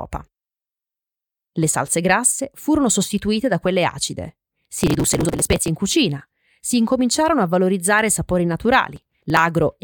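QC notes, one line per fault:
4.78–5.68 s: processor overload crackle. For about 0.9 s the speech breaks into dense gritty crackle as the processor repeatedly misses its buffer deadlines. Each missed block is dropped, leaving hard-edged skips, and the tiny spacing fits a buffer of around 5 ms.
8.96–9.39 s: processor overload crackle. A second, shorter burst of about 0.43 s with the same skipped-buffer tearing, fewer misses in a row, ending cleanly when the load eases.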